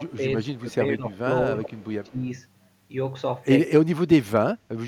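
From the start to 1.18 s the speech dips by about 10 dB in patches, likely speech suppressed in double talk: the echo canceller couldn't tell this talker from loudspeaker echo while both sides spoke, so it turned everything down. Inside that, from 0.44 to 0.6 s, there's a faint echo leak, a copy trailing by 171 ms at about 35 dB below the speech, likely residue the far end's canceller missed. A stronger echo leak runs from 1.57 to 2.1 s, delayed 215 ms and only about 20 dB down. The double-talk ducking returns from 2.05 to 2.31 s (about 15 dB), from 3.69 to 3.84 s (about 20 dB), and from 4.23 s to the end, where the sound drops by about 35 dB and nearly cuts out.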